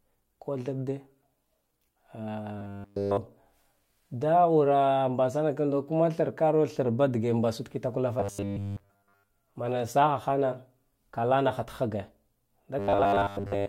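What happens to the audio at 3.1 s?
Robotic sound from repeated short buffers covers 2.58 to 3.17 s, so 3.1 s falls near the end of it. The likely cause is new audio arriving too slowly, with playback looping a 10 ms slice in its place while the real signal is skipped. Across essentially the whole span, that loop imposes a fixed 100 Hz buzz, turning the speech into a rigid, metallic drone that only loosely tracks what is being said.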